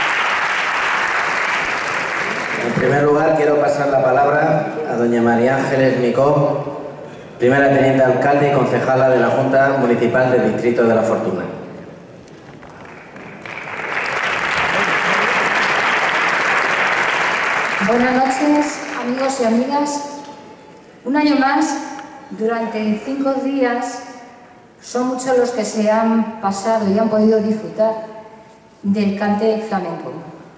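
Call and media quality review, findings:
Findings: none for call and media quality, with the audio arriving through the call path as expected and nothing above 8 kHz.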